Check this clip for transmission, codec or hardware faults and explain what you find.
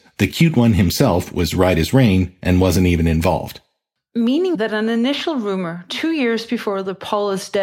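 No faults detected.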